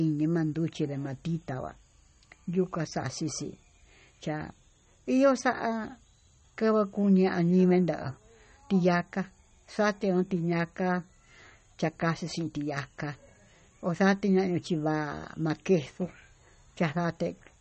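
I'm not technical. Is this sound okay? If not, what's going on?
No. All the way through, this speech has a watery, swirly quality, with s sounds turning metallic and chirpy and the starts of sounds smeared. Nothing reaches above about 8.4 kHz, so it also sounds dull. The likely cause is heavy MP3 compression: the file was squeezed so hard that the encoder cut the treble and let faint detail flicker in and out. A plain muffled recording would sound dull but smooth, without that bubbling shimmer.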